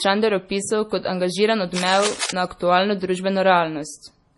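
Heavy low-bitrate encoding, likely MP3 compression, has starved this speech of bits: nothing survives above 11.3 kHz, and the thinned spectrum sounds watery and swirly, consistent with roughly 32 kbps. Just after "opisal kot angažiran", a worn cable or connector likely being moved adds cable scratch noise from 1.75 to 2.30 s, dense rustling bursts about 5 dB below the speech.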